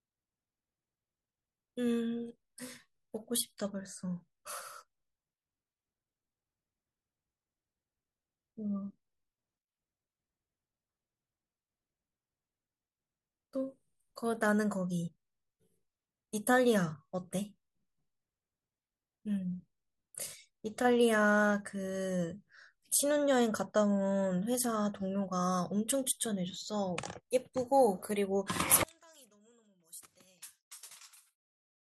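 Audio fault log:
28.83–31.85 s, one channel inverted: the speech drops by about 28 dB to a faint copy. One channel's polarity is likely reversed, cancelling centred sound in mono.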